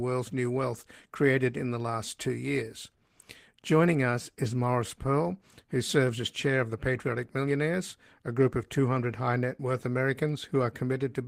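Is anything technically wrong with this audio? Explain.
No, nothing technically wrong can be heard here.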